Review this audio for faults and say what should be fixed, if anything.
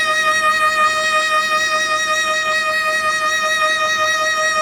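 Opus compression is plainly audible throughout the music. Tones sound grainy, rough and noisy rather than swirly. The codec keeps each band's energy, but starved bands get filled with folded or noise content. Content still reaches about 20.4 kHz. The likely cause is a low-bitrate Opus encode around 24 kbps. To prevent it, encode at a much higher bitrate or deliver a lossless master.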